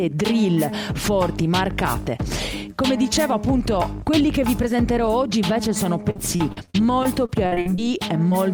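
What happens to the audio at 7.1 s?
At 7.1 s the audio is inside a stretch of repeated packet loss (robotic sound) running from 6.10 to 7.79 s. About a dozen short holes, the longest around 50 ms, are patched by extending the preceding sound. That covers roughly a fifth of the span and gives a choppy texture with pieces missing.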